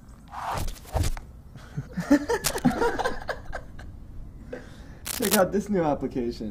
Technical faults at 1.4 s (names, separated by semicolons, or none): none